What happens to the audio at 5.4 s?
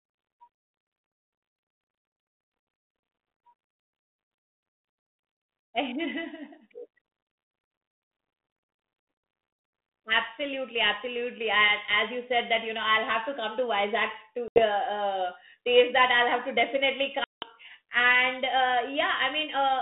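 At 5.4 s the speech carries on intact, with no dropout, click or other fault, only the narrow 200 Hz to 3.7 kHz telephone band of the 32 kbit/s G.726 ADPCM path it travels through.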